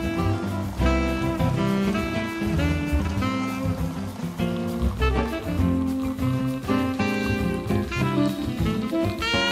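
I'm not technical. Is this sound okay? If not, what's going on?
Yes, nothing in this recording points to a technical problem.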